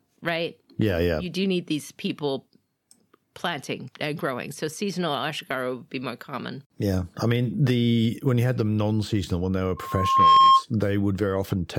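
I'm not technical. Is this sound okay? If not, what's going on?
No. There is a loudspeaker feedback squeal from 9.77 s to 10.64 s, starting just after "when they were". The microphone is picking up the loudspeaker it feeds, so at one pitch, about 1.1 kHz, the sound goes round the loop and keeps getting louder. Over about half a second it swells from nothing into a steady whistle that ends up clearly louder than the speech.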